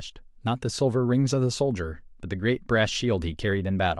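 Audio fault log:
The speech signal shows no audible technical faults anywhere in the clip.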